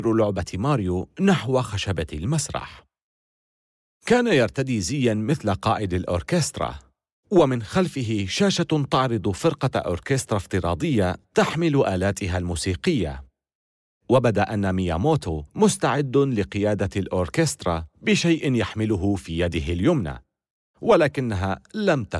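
No technical faults are audible.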